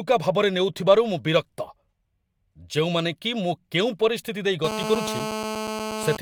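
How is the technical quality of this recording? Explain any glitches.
The recording has one interference fault near its end. From 4.64 s to 6.17 s a GSM phone buzz sits under the speech at about 6 dB below it. A nearby handset on a call transmits radio bursts 217 times per second, and the audio circuitry rectifies them. The result is a steady, hard, raspy 217 Hz buzz with dense harmonics, unrelated to the speech.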